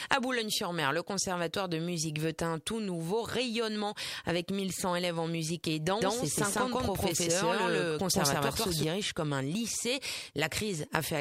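The audio has a doubled audio track from 6.01 s to 8.83 s. A second full-band copy runs about 150 ms behind the first, at roughly the same level. It adds no decay or room colour. The copy cuts in and out abruptly at those two points. It sounds like a hard slapback rather than an echo. The likely cause is the same signal being captured again through a slower path, or two out-of-step copies left in an edit.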